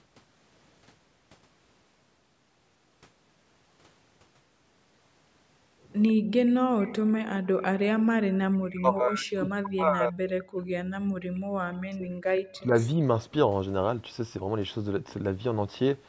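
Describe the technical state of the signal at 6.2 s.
At 6.2 s a faint, delayed copy of the speech trails the original by about 148 ms, sitting roughly 25 dB below it, from 6.07 to 6.88 s. This is likely an echo leak: a far-end loudspeaker's sound reached its microphone and slipped past the echo canceller back into the call.

Over the same moment, from 6.15 to 6.31 s, the room sound briefly drops away, falling by up to about 33 dB for around 150 ms before returning. This is background gated by the echo canceller, which clamped the microphone down while the loudspeaker was playing.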